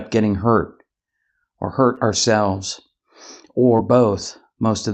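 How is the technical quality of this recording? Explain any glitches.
The speech has two brief concealed dropouts; the call codec's high end stops at around 8 kHz.

Short concealed packet loss at 1.95–1.99 s and again at 3.77–3.81 s: each time about 20 ms of audio arrived too late, so the receiver extended the preceding sound for 15 to 18 ms and crossfaded back, leaving a quick smear or wobble.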